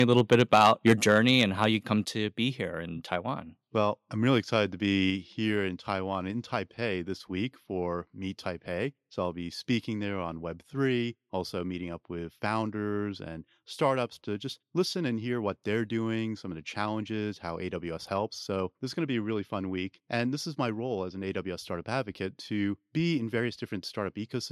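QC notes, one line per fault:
0.00–1.65 s, microphone overload: the loudest syllables take on a harsh, crackling edge as their peaks flatten against the converter's ceiling, pushed about 6 dB past it, with only a small share of samples cut off; likely caused by input volume set too high.
1.02 s, microphone volume stepped down: voice and background drop together by about 4 dB in a single abrupt step, partway through the distorted opening, likely because the call software detected the clipping and lowered the device's input gain.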